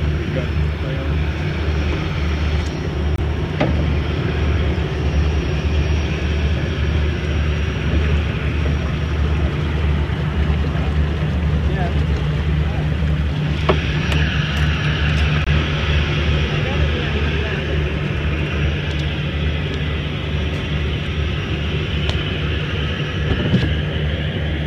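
Two brief silences break the audio, at 3.16 to 3.20 s and at 15.44 to 15.48 s. Each gap is about 23 ms long, and the sound picks up afterwards as though it had kept playing through the hole. The pattern is likely a Bluetooth dropout: a packet missed its delivery window to the headphones and was discarded, and the length of each gap fits a single lost codec frame.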